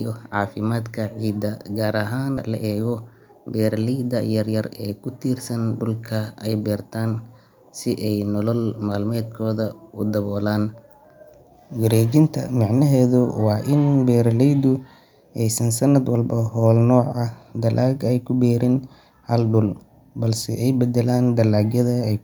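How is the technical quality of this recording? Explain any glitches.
The recording has two closely linked timing glitches just after the start, both in the delivery of the audio rather than the speech itself.

Skip ahead at 2.37 s: roughly 0.7 s of speech was discarded, most likely by a jitter buffer that overflowed while later audio was already queued. Playback leaps forward with no filler, so the talking jumps abruptly as two separated moments are butted together.

Jitter buffer speed-up from 2.47 to 3.29 s: with delay still above its target, the receiver trimmed short pitch-period slices repeatedly, removing around 70 ms in total. The speech runs at about 109% speed with unchanged pitch, sounding slightly rushed through that stretch.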